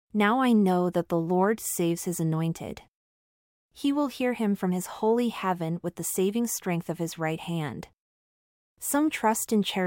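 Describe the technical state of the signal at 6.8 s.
At 6.8 s the speech signal is intact, with no dropout, distortion, glitch or other audible fault at that point.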